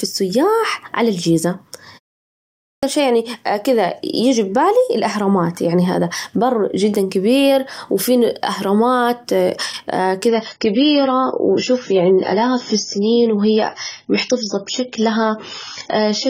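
At 2.33 s there's a clipped start after a pause. The output seems to have dozed off during the 0.42 s gap and takes about half a second to come back, so the sound bursts in abruptly with its opening chopped off, right up to 2.83 s.

From 10.28 s to the end, the adaptive stream drops to a lower bitrate. The change is sudden, with no gap: the top end vanishes above 7 kHz and the sound turns duller and more smeared, which fits a switch from roughly 96 down to 16 kbit/s AAC.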